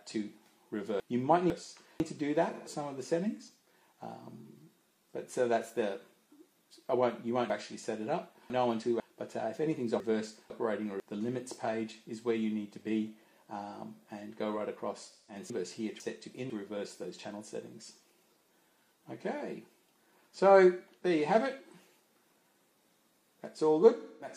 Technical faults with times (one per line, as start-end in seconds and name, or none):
1.00-2.00 chunks out of order
2.53-2.69 AAC frame loss with concealment
7.50-9.00 chunks out of order
10.00-11.00 chunks out of order
15.11-15.35 AAC frame loss with concealment
15.50-16.50 chunks out of order
21.64-21.70 AAC frame loss with concealment
23.99-24.31 AAC frame loss with concealment